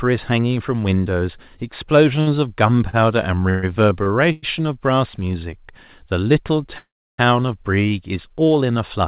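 At 2.21 s a packet arrived late and the jitter buffer ran dry, producing a short stall from a late packet. The receiver stretched the last sound for about 58 ms until the packet arrived, so the speech briefly holds with a slight buzz or dip, then resumes intact.

From 2.89 to 4.45 s packets kept arriving behind schedule, emptying the buffer four times. This causes repeated stalls (stutter): about 291 ms of stretched sound, the longest hold 128 ms, roughly a fifth of that stretch. The speech drags and stutters without losing anything.

From 6.78 to 7.20 s the audio stops for about 400 ms. A brief continuation of the last sound fades into about 320 ms of silence, then speech picks up exactly where it stopped. This is a call audio freeze, likely from packets held up in transit. Throughout, nothing above 4 kHz comes through, which fits a narrowband G.711 call path.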